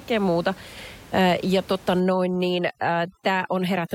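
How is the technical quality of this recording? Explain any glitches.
The recording has one processing fault in its second half. Overdone noise removal, from 2.0 s to the end: the noise reducer gates bands near its noise estimate, leaving twinkling specks where room noise sat about 23 dB below.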